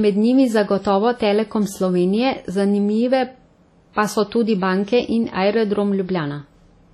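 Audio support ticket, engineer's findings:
Ringing, washy speech with hiss that swells and fades with the signal, throughout; no content above 14.2 kHz. Likely WMA compression: long transform blocks smearing quantisation noise, weak components zeroed. Heavy damage fits a low bitrate, around 32 kbps.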